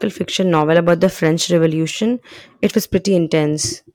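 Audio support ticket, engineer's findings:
Harsh, gritty fuzz on speech peaks, 0.54–1.66 s. Hard clipping: signal driven about 4 dB past the ceiling of a gain or converter stage, tops cut flat, high harmonics sprayed upward. Lighter crackle, 2.64–2.95 s: same hard clipping, overload about 2 dB, so only the loudest peaks flatten. Check input gain and converter headroom.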